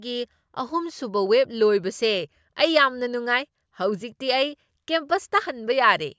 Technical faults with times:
none

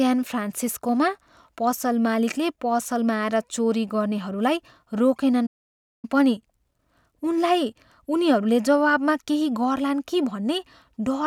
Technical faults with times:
5.46-6.05 playback stall

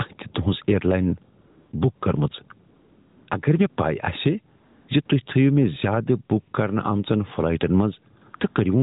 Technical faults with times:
0.00-8.83 gain pumping
1.40-2.02 AMR comfort noise
2.68-3.28 AMR comfort noise
3.70-3.78 AMR comfort noise
4.56-5.10 AMR comfort noise
8.20-8.56 AMR comfort noise

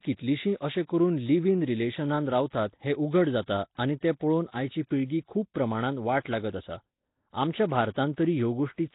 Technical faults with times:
0.00-8.95 Nellymoser compression
2.50-2.53 pre-echo
6.23-6.25 pre-echo

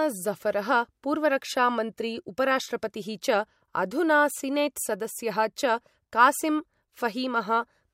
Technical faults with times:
none

